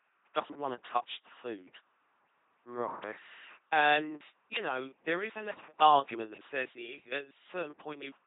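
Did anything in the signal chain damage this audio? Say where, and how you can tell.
Yes. An LPC-10 vocoder runs throughout the speech at the codec stage, and the damage is heavy. The whole clip has a buzzing, mechanical robot quality, and nothing is present above 3.8 kHz. The vocoder treats each moment as entirely voiced or entirely unvoiced, then drives a short all-pole vocal-tract filter with either a pulse train or noise. That all-or-nothing excitation causes the buzz, and the very low data rate points to roughly 2.4 kbit/s.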